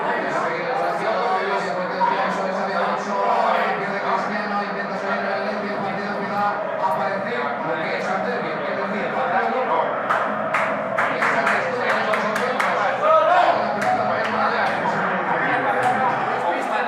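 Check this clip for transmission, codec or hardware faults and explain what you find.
Nothing audible points to a transmission, codec or hardware fault anywhere in the clip.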